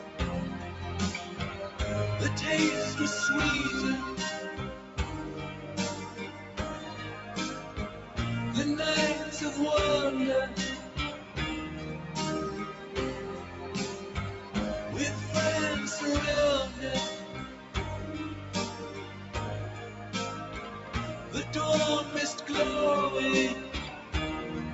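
From start to finish, a noise suppressor applied to music or sounds is shaping the audio. It was built for speech. It treats steady tones, ambience and reverb as noise and pulls them down. Onsets mostly survive, but held sounds and tails sink. The level swings by around 10 dB as it works. The result pumps and thins.

Eight spots show sound cut by the noise suppressor, each dipping by about 5 dB. They fall at 0.0 to 0.18 s, 4.76 to 6.57 s, 7.62 to 8.17 s, 10.78 to 11.36 s, 12.74 to 14.55 s, 17.26 to 17.75 s, 19.04 to 21.34 s and 23.97 to 24.13 s. Here sustained or fading sound is judged as noise. It drops away or its decay is clipped short. The longest loss runs about a second, near 19 to 21 s. The top end stops near 8 kHz. That points to the call codec path, likely Opus at about 48 kbps.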